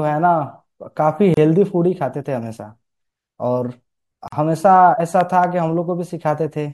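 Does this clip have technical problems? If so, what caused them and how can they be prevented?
Yes. Gaps at joins of encoded pieces occur at 1.34–1.37 s (31 ms) and 4.28–4.32 s (44 ms). Segments encoded separately were joined without trimming, so each encoder's start-up delay and final-frame padding remain as brief silences with smeared edges. The speech then resumes where it stopped. To prevent this, encode the recording in one pass, or trim each piece's encoder delay and padding before joining.

A loud pop, heard as two pops in quick succession, falls between 5.21 and 5.46 s. It peaks roughly 10 dB above the speech, which continues underneath. The likely cause is a sudden voltage step from a connector, switch or static discharge entering the signal chain, with downstream circuitry shaping it into sharp transients. To prevent this, secure cables, mute before switching, and ground equipment properly.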